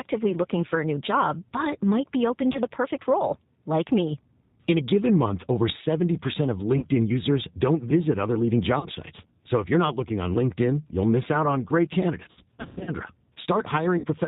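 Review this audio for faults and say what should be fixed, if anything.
The speech went through a narrowband CELP coder, which fits G.729 at 8 kbit/s. Each 10 ms frame is rebuilt from a vocal tract filter, a pitch predictor and a handful of pulses, so nothing above 4 kHz survives and the voice sounds plainly rough and synthetic. Carrying the call on a wideband codec such as G.722 or Opus would prevent this.

VoIP packet loss concealed by the speech codec: when packets went missing, the decoder stretched its last pitch and filter into a fading buzzy tone or coloured noise, and the voice stays weak while it recovers. This happens at 2.53 s after "but might be open", at 6.78 s before "users don't visit other", at 8.79 s and at 13.98 s. The worst stretch runs from 12.31 to 12.92 s after "miss out on great", where about 360 ms is lost in gaps of up to 100 ms. An adequate jitter buffer with forward error correction, on a less congested network path, would prevent this.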